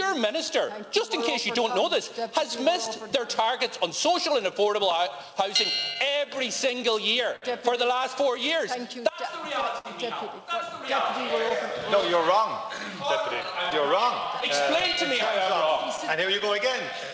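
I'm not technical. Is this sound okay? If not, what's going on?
No, it has a few timing problems, though they're small.

The biggest is clock drift between sender and receiver. The sending end's clock runs about 4% slower than the receiving end's, so audio arrives a touch too slowly and the receiver keeps running short of material to play.

To cope, there are repeated timing corrections from about 0.04 s to 16.3 s. The receiver keeps stretching tiny bits, playing at roughly 98% speed and adding under half a second overall. You might notice a slightly uneven pace or faint hiccups.

There are also two moments of short stall from a late packet: 7.36 to 7.44 s, about 59 ms, and 9.78 to 9.87 s, about 64 ms. A piece of audio arrived late, so the last sound was held briefly. Nothing is lost, but you may hear a tiny drawn-out buzz.

From 11.49 s to 16.96 s come scattered short gaps, around twenty small holes, none longer than about 15 ms. 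Each is patched by continuing the previous sound, so expect brief ticks or smears.

The call line itself also cuts everything above 8 kHz, which is normal for this kind of call, so the sound lacks some crisp top end.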